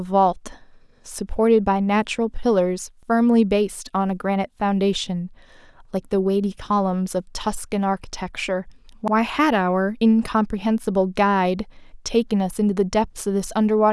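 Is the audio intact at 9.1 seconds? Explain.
No. From 9.08 to 9.13 s, overlapping chunks replay a 50 ms slice of speech at a join, heard as a stutter. The waveform shows that segment duplicated, with a vertical discontinuity line on the spectrogram.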